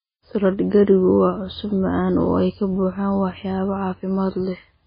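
From start to finish the speech is dull and band-limited, with nothing above 5 kHz, and carries a watery, swirling texture with smeared consonant onsets. This is likely heavy MP3 compression at a low bitrate near 16 kbps, where the encoder truncates the treble and drops weak spectral lines that flicker between frames.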